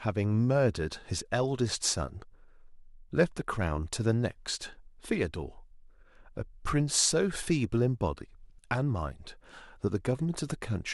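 Speech recording, with no technical faults to report.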